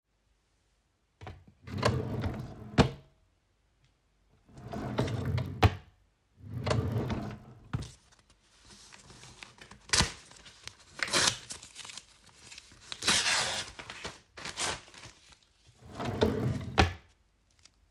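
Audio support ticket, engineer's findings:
Steady 50 Hz buzz through the whole clip, present only while sound plays. Resampler restarted on every block. Each 20 ms block is converted in isolation, so every edge carries an error. Fits a 24 kHz to 48 kHz upsampling stage.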